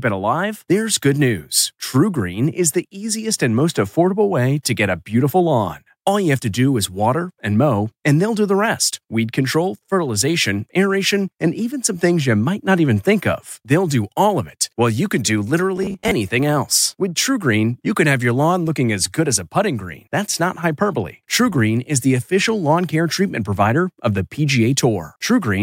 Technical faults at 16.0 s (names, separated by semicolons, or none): robotic sound from repeated short buffers